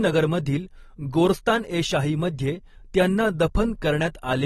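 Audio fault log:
Throughout, AAC compression: the speech is dull and smeared, with nothing above 12.5 kHz and a warbling, fizzy texture on sibilants and held sounds, likely from low-bitrate AAC-LC discarding high bands and coarsely quantising the rest, which fits roughly 32 kbps.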